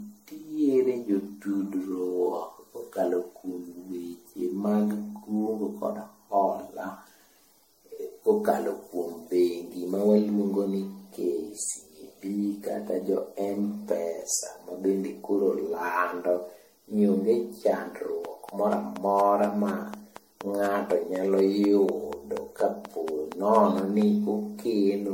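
From the start the speech has a swirly, hollow, smeared quality, with consonant attacks blurred and nothing above 16.5 kHz. That's generation loss: the sound seems to have been put through MP3 around ten times, each pass re-quantising on a shifted frame grid so noise and spectral holes pile up. It's worse than a single low-rate encode would give, though the bandwidth points to something like 64 kbit/s MP3.

From 18.25 s to 24.03 s there's a train of clicks: about thirty near-identical pops at a steady 4.16 per second, peaking about 10 dB above the speech and ticking through the pauses as well. Regular, same-shaped pulses like that are likely interference from nearby equipment or a faulty connection or power supply injecting spikes into the signal path.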